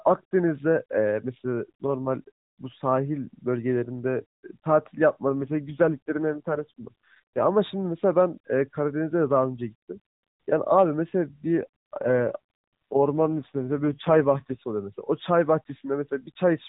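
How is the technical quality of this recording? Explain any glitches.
It's narrowband mobile-call speech, AMR-NB at what sounds like its 12.2 kbps mode, so nothing above 4 kHz gets through. Two AMR rate drops, 5.31 to 7.47 s and 11.44 to 14.60 s, sound like the network forcing the codec down to about 5.9 kbps. The speech goes buzzier and more synthetic, with no gap, then recovers.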